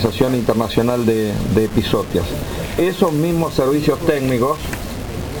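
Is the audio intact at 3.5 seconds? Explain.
No, at 3.5 seconds, as throughout, there's gritty, grainy distortion that tracks the sound, likely low bit depth without dither, with rounding to about 5 bits leaving noise roughly 20 dB down.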